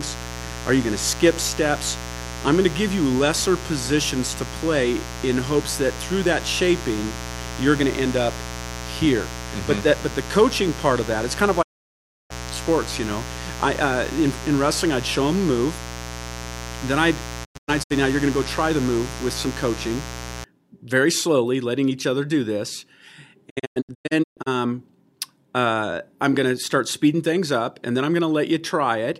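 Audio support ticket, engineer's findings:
Mains buzz, 0 to 20.44 s: steady raspy 60 Hz buzz with harmonics up into the kHz range, sitting roughly 10 dB under the speech. Sharp switching spikes from a dimmer, rectifier or unshielded run getting into the chain twice per mains cycle.

Digital broadcast dropout, three spots: 11.61 to 12.32 s, one 672 ms hole; 17.44 to 17.92 s, 256 ms of holes, longest 96 ms; 23.48 to 24.48 s, 544 ms, longest 128 ms. Each has 20 ms fades. Receiver muting on lost or bad frames, which fits roughly 32 ms frames.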